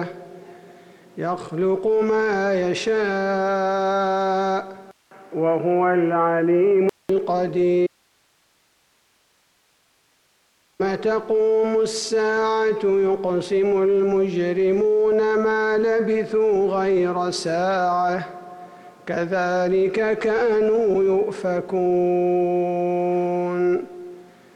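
From 4.91 s to 7.09 s the sound turns dull and boxy after a 200 ms silence, most likely an input switched to a poorer device. A spectrogram shows nothing above 3.1 kHz and a new noise floor well below the signal, with loudness roughly unchanged.

At 7.87 s the signal cuts out abruptly for 2.93 s, returning at 10.80 s. This audio dropout to a faint residue, likely a lost input feed on a path that stayed live, leaves only hiss about 45 dB down, a near-flat waveform band.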